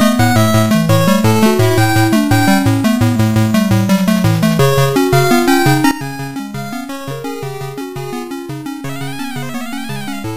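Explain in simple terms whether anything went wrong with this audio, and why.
A sudden gain jump happens at 5.91 s. From that moment to the end of the clip, everything becomes clearly quieter at once, and the background hiss drops by the same amount as the main sound. Because both fall together in a single instant rather than fading, the cause is likely a volume setting inside the digital chain that changed all at once, with no gradual ramp to smooth the transition.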